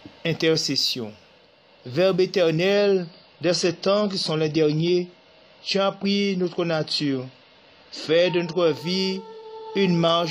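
Adaptive stream at a lower bitrate from 2.73 to 8.73 s: the stream drops abruptly to a leaner encoding, fitting roughly 32 kbit/s, cutting everything above 11.5 kHz, without any gap.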